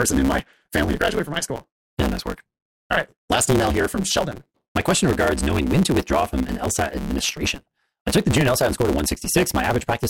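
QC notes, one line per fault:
Throughout: block size mismatch (truncated). A steady buzz at 138 Hz sits under the speech, and the talker runs about 1.6 times faster than normal while the timbre stays natural. One stage is handing over longer blocks than the next stage takes in, so the tail of every block is dropped. The buzz comes from the discontinuity at each cut, and the discarded audio shortens time. The pattern fits a 512-sample written block.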